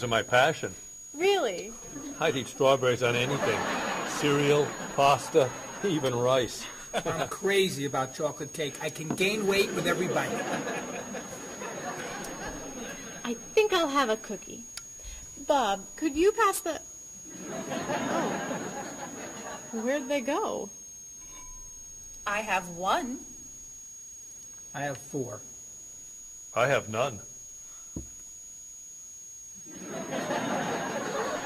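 Switching supply whistle runs throughout the clip, a thin high tone wandering between about 6.5 and 6.75 kHz and sitting roughly 15 dB under the main sound. A switch-mode power supply somewhere in the chain has dropped into an audible operating pattern, either bursting at a low rate or beating against another converter, and its switching energy leaks into the audio. The result is a persistent whine whose pitch drifts slightly as the supply's load shifts.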